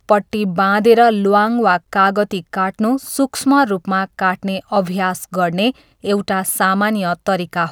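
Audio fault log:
No audible fault found anywhere in the clip.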